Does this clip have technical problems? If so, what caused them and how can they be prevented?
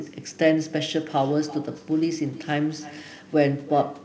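Yes. Echo with no canceller runs throughout this speech: a quieter copy, about 19 dB down, returns roughly a third of a second later. It is a distinct delayed repeat, unlike a room's smooth reverberant tail. Running acoustic echo cancellation on the far end, or having that listener use headphones, would prevent it.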